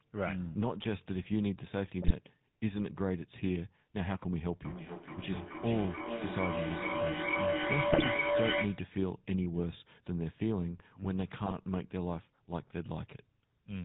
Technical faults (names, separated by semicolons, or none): GSM full-rate codec; GSM bit errors; feedback howl